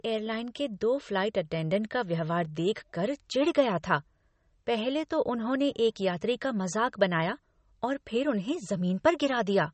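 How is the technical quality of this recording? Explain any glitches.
Technical quality is limited by plainly audible lossy coding damage that runs through the whole speech recording.

The fault is MP3 compression, likely at a low bitrate around 33 kbps. Short of bits, the encoder cuts off all content above about 8.4 kHz, so the speech sounds dull and band-limited. Weak frequency lines are dropped and return from frame to frame, which gives a watery, swirling texture and metallic chirps on s sounds, and consonant attacks come out smeared.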